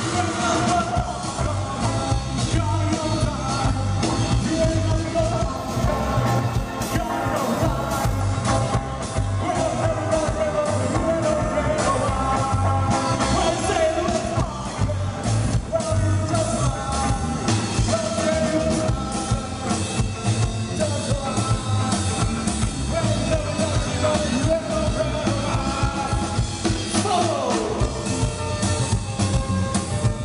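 From 5.57 to 8.20 s there is imaging from linear upsampling. The sound points to a rate of about 22 kHz being raised to 44.1 kHz by joining samples with straight lines. That interpolation filters poorly. The top of the original band is dulled. A mirrored copy of the spectrum survives between roughly 11 and 22 kHz, around 30 dB below the signal. It adds a faint metallic shimmer over the high end.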